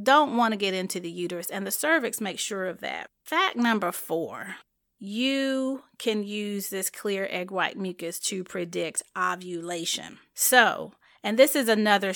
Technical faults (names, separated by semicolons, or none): none